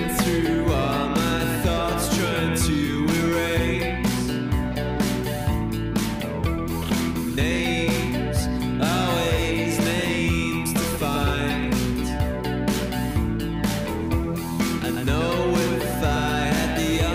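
No technical faults occur at any point in the clip, so there is nothing to describe in time order.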